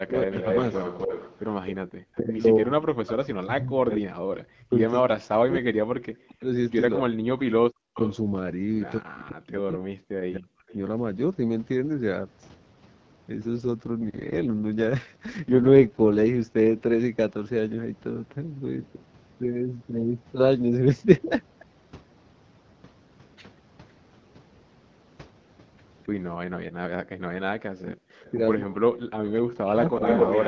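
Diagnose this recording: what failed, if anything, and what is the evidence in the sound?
Call processing: the echo canceller likely misjudged double talk and attenuated the near-end speech, which dips by about 20 dB at 0.0 to 0.44 s and by up to about 40 dB across 2.19 to 10.74 s and 27.48 to 30.02 s.

Call processing: a loudspeaker echo leak, likely from an incompletely converged canceller, returns a copy 262 ms late: about 5 dB down at 0.22 to 3.97 s, about 20 dB down at 7.94 to 8.17 s, and at roughly speech level from 28.26 s onward.

Call processing: background gated by the echo canceller. Aggressive suppression drops the room sound by about 30 dB at 1.84 to 1.91 s and about 40 dB at 26.66 to 27.19 s.

Network and codec: an AMR rate drop from 12.65 to 6.6 kbit/s between 13.62 and 16.56 s makes the speech rougher and more synthetic, with no bandwidth change or gap.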